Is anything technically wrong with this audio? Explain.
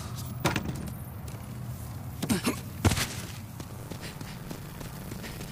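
Yes, there's buffer tearing from 3.66 s to the end. The write and read pointers on the ring buffer have drifted into each other, so a small slice of each 10 ms period replays audio from about 40 ms earlier. Those hard splices give a steady robotic 100 Hz buzz over the sound.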